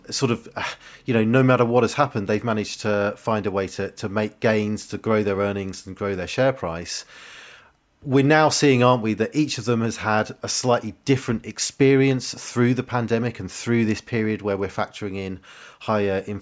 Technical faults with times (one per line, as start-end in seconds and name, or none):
none